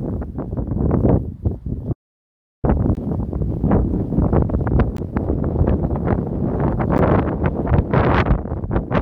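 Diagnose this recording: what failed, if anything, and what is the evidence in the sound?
Audio dropout to silence from 1.93 to 2.64 s: the sound stops mid-flow and about 0.7 s of silence follows, with no room tone, before it resumes abruptly. At the input or driver stage, the source was likely disconnected or muted while recording continued, so that material is gone.

Gap between stream segments at 2.95, 4.97 and 6.98 s: short, hard-edged holes of roughly 19, 17 and 10 ms recur every 2 s. At the network or playback stage, segment time stamps leave small gaps that the player fills with silence. No audio is lost.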